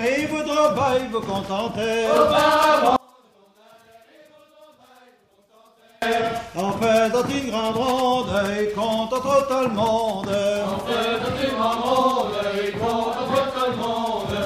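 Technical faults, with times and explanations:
2.96 to 6.02 s, one channel inverted: the sound falls by about 33 dB and becomes a faint residue, as if its centre had been scooped out, before returning at full level. The likely cause is one side of the stereo pair flipping polarity, so when left and right are summed to mono, everything common to both cancels and only the small difference between the two channels remains audible.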